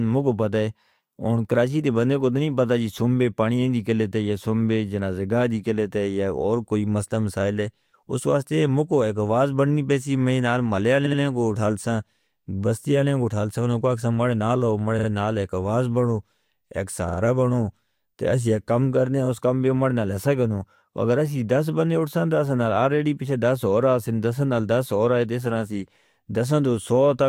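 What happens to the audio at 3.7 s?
Nothing goes wrong at 3.7 s: the speech there carries on continuously, with no dropout, click, distortion or level change.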